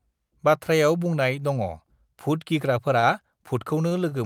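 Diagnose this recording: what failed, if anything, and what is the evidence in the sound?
The network stage failed, at the receiver's jitter buffer. Three short stalls from late packets are audible. The first runs from 2.99 to 3.05 s, just after "बाथ्रायाव बुंनाय दङभुत", with about 35 ms of sound held. The others run from 3.89 to 3.93 s and from 4.09 to 4.13 s, holding 23 ms and 20 ms. Each time a packet arrived late, the buffer ran dry. The last sound was stretched with a slight buzz or dip until the packet landed. Then playback resumed where it stopped. Nothing is lost, but timing slips.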